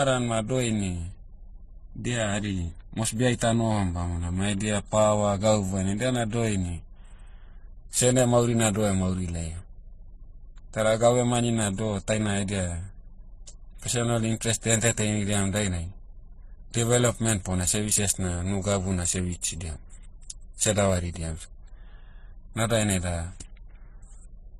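A speech clip with a hard ceiling: nothing reaches above 12.4 kHz for the entire length, and the voice carries layered, watery coding artefacts throughout. This is likely transcoding between lossy codecs, with a very low-rate HE-AAC encode later re-encoded as MP3 at a modest bitrate. The MP3 stage wastes bits on the earlier smearing and adds its own. On a spectrogram the upper band ends in a flat edge at 12.4 kHz, with blotchy, speckled detail below it.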